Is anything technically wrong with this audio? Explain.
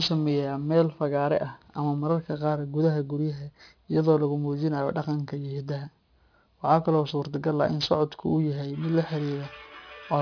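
Yes, there's aliasing throughout the speech. It sounds like the audio was downsampled to about 11 kHz with no anti-alias filter, so everything above 5.5 kHz folds back down, leaving sibilants gritty and metallic, with the folded junk roughly 20 dB under the speech.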